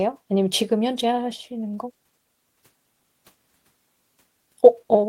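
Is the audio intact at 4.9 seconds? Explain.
Yes, the audio is intact at 4.9 seconds, with no fault at that moment.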